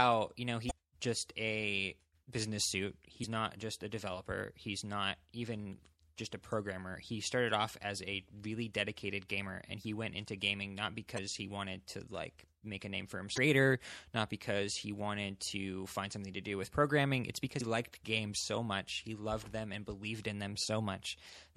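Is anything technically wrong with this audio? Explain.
Yes, there are two problems. Throughout all the speech there's a plainly audible watery, swirly quality, with the top end dulled and the s sounds chirpy and metallic. That's most likely MP3 compression, and the amount of damage points to a low bitrate, somewhere around 64 kbps. The encoder runs short of bits, so it cuts the treble at a fixed point and drops quieter frequency components that then flicker on and off from frame to frame.

On top of that there are five short blips from damaged data in the compressed stream: at 0.67 to 0.72 s, right after "you know"; at 3.20 to 3.25 s, between "just a business suit" and "not just a developer"; at 11.14 to 11.19 s; at 13.34 to 13.38 s; and at 17.60 s, just before "liked games so much". Each one comes from corrupted bytes. The decoder misreads those frames, loses sync and hunts for the next frame header, so you get a quick chirp or squawk about 45 ms long, or shorter in the last case.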